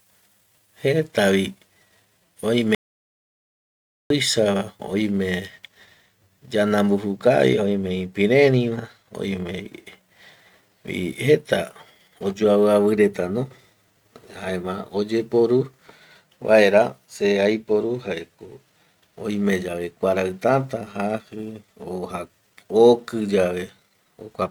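At 2.75 s the speech cuts off mid-flow and the track falls to complete silence. This is an audio dropout to silence. It lasts until 4.10 s, about 1.35 s in all. No room tone or background remains in the gap, so it is dead silence, not a quiet passage. The likely cause is a lost input, such as a disconnected device or brief mute, while recording carried on. Whatever was spoken in that span is missing.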